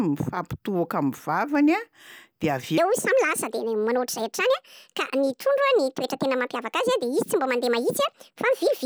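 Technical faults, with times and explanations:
2.78 to 8.85 s, section at the wrong speed: right after "a dia avy" the speech jumps to 1.6 times its proper rate and stays there to the end, so it sounds hurried and chipmunk-like, pitched up roughly seven semitones. Likely a playback or editing clock mismatch.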